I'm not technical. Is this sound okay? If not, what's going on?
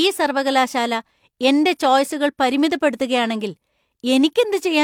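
Yes, this speech recording sounds fine, with nothing going wrong at any point. There is no problem here that needs explaining or fixing.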